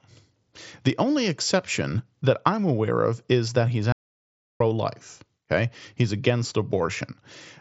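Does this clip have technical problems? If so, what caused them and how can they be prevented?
Yes, there's an audio dropout to silence from 3.92 s to 4.60 s. The speech cuts off abruptly and about 0.68 s goes completely dead, with no room tone at all, before picking back up mid-flow, so whatever was said in that gap is lost. Since the band tops out around 7.7 kHz, consistent with an mSBC Bluetooth headset, the likely cause is a brief break in the wireless link, with the recorder filling the gap with silence. To prevent it, keep the headset close and clear of interference, or use a wired mic for anything important.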